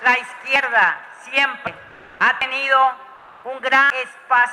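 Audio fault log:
0.56, 1.67, 2.42 and 3.90 s, dropped buffer (overrun): Each spot has a sudden jump in the sound and no gap. About a tenth of a second is missing at the first three, and about 0.3 s at 3.90 s. The likely cause is samples overwritten before they were read.
1.91 to 2.19 s and 3.16 to 3.44 s, comfort noise in place of the background: The background, about 32 dB below the loudest sound, turns smooth and featureless for 280 ms each time, with a level shift of about 2 dB. This likely comes from discontinuous transmission such as Opus DTX, with synthetic noise filling the pause.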